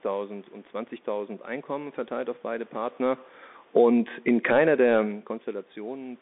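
From start to finish the speech passes through a Bluetooth CVSD headset codec, the narrowband link headsets use for calls. The audible band runs only from about 250 Hz to 3.6 kHz, which fits a 64 kbit/s CVSD channel. CVSD sends a single up-or-down bit per sample and adapts its step size, so it cannot follow fast, loud high-frequency movement. Here that damage is plainly audible: sibilants come out scratchy, and a grainy hiss sits under the speech throughout.

From 3.0 s to 4.67 s the automatic gain falls. The gain control treated the incoming level as too high and pulled its gain down by about 10 dB over more than a second and a half. Voice and background sink together rather than the voice alone fading, which separates this from the talker shifting position near the microphone at around 2.5 s.

Overlapping that, from 3.84 s to 5.06 s, the automatic gain rises. The input level dropped by about 19 dB, partly as the talker moved again around 4.5 s. 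The control responded by slowly raising gain about 3 dB. Voice and room noise swell together over roughly a second. That recovery is far smaller than the drop, so the later speech stays noticeably quieter than the opening.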